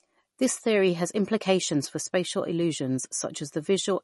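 Speech, with MP3 compression damage throughout. Nothing sounds above 11.6 kHz, where the encoder cut the treble. The watery, swirling artefacts are plainly audible. They likely come from a starved bitrate, around 40 kbps, that leaves weak frequency lines flickering between frames.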